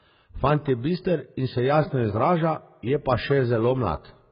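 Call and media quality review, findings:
Dull, band-limited speech throughout, nothing above 5 kHz. Heavy smearing and a warbling, fizzy texture. Likely AAC compression, AAC-LC at a very low bitrate, consistent with about 12 kbps. The encoder drops the top band and quantises coarsely, leaving spectral holes.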